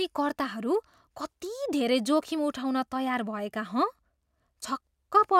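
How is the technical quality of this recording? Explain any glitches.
No glitches or technical faults are audible here.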